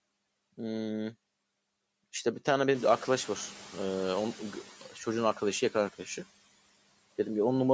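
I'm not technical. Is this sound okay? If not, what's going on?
No. At about 2.5 s the room noise suddenly gets louder, and from 2.74 s the noise suppressor catching up lets it through with less reduction until it quietens by 4.69 s.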